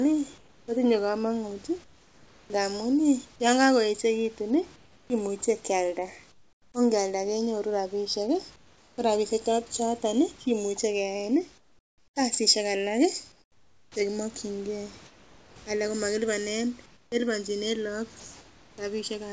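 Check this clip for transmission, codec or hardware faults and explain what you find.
Three faults turn up: a slow stereo drift, comfort noise substituted for the background in the pauses, and one clipped speech onset.

Channels drifting apart runs through the whole clip. The two channels run on clocks that disagree by around 40 ppm, so their offset slides to a little under a millisecond by the end. Summed to mono, comb notches creep through the spectrum, giving slow flanging.

Comfort noise in place of the background appears from 0.38 to 2.50 s (before "ngamuun yan kagoechegitun"), 4.76 to 6.74 s (after it), 8.56 to 8.98 s and 11.58 to 18.78 s (after "choton kimuche keyaen"). The sender most likely stopped transmitting during pauses, and the receiver generated synthetic noise instead. The real room background, already band-limited at 8 kHz by the G.722 call path, gives way to a smooth, featureless hiss. 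At 8.56 s it also drops about 7 dB.

An onset clipped by the voice detector occurs at 13.93 to 13.96 s. The detector was likely slow to register that speech had resumed, so about 30 ms went unsent and was filled with comfort noise. The speech therefore starts abruptly, missing its soft leading edge.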